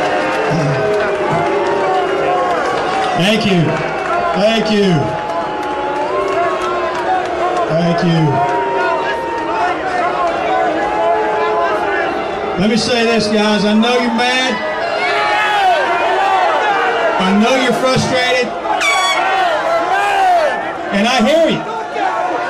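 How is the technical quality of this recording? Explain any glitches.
Two brief glitches come from compressed frames skipped, at 1.24 s and 16.45 s. At each point roughly two whole frames never reach the output, which fits a frame length of 26.1 ms, so the audio jumps ahead by about 50 ms. Overlap between neighbouring frames smears the join into a short blip rather than a sharp click. On a waveform the envelope shows a sudden discontinuity, and a spectrogram shows a faint vertical smudge where the texture abruptly shifts.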